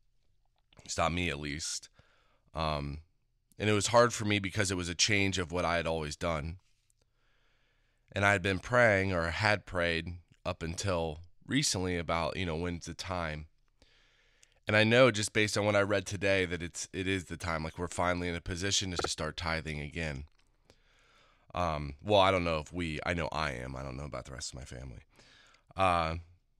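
At 1.63 s, after "stopped me at", repeated frames cause a stutter: one 26 ms block replays four extra times, adding 105 ms. At 18.98 s, after "in a position to", a 52 ms block replays twice before "start tithing again", adding another 105 ms.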